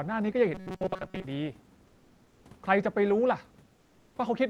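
From 0.54 to 1.24 s the speech takes on robotic sound from repeated short buffers. The audio is likely arriving too seldom, so the receiver keeps replaying a fragment about 5 ms long while much of the real signal, roughly 70 percent, is skipped. That loop imposes a fixed 188 Hz buzz, so the voice turns metallic while still loosely tracking the syllables. A comb filter or flanger would leave the natural pitch moving underneath; here a rigid buzz is imposed at a fixed rate.

Between 3.75 and 4.15 s there is comfort noise in place of the background. For about 400 ms the real room noise, which sits about 34 dB below the speech, gives way to a smooth, featureless hiss about 5 dB quieter, the likely result of discontinuous transmission, which fits Opus DTX on this call path. A noise gate would drop to near silence. Here a synthetic bed of noise keeps playing, but the texture of the room disappears until sound resumes.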